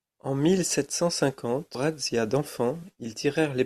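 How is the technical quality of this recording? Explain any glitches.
The recording has one glitch: a brief blip in the speech at about 1.75 s. It comes from damaged data in the compressed stream. A short run of the encoded bytes at that point was wrong, so the decoder could not read the frame correctly. It lost sync and skipped forward to the next valid frame header. The result is a momentary glitch where the corrupted frame's content should have been.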